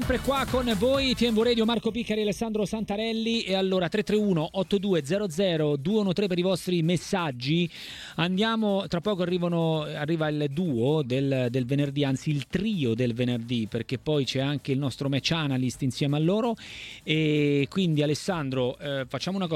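Channel delay (comb filtering) runs from 1.74 s to 3.34 s. One channel arrives late by roughly a third of a millisecond, and when the two are summed to mono, their shared content cancels at evenly spaced frequencies. The first notch sits around 1.5 kHz, with further notches repeating above it at regular intervals. For that stretch the sound turns hollow and phasey. Parts of the upper midrange are scooped out, and the effect stops at 3.34 s.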